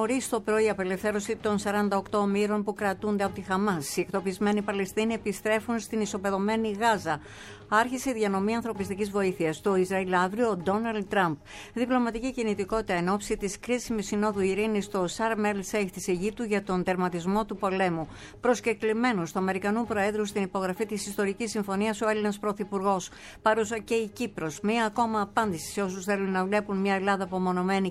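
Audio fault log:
No faults detected.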